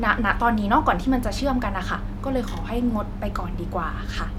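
No technical faults are audible.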